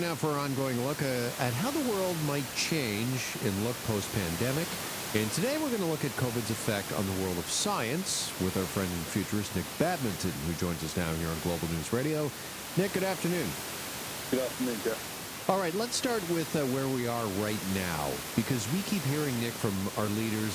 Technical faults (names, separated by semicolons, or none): none